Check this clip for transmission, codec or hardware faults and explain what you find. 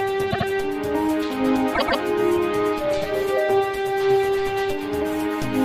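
Two bursts of repeated frames stand out, at 0.30 to 0.46 s and at 1.74 to 2.00 s. A short block of compressed audio, 78.4 ms in the first case and 130.6 ms in the second, was delivered three times in a row, adding 156.7 ms and 261.2 ms. That points to groups of about three and five frames. Each repeat is heard as a stutter. On a waveform and spectrogram the same pattern recurs side by side.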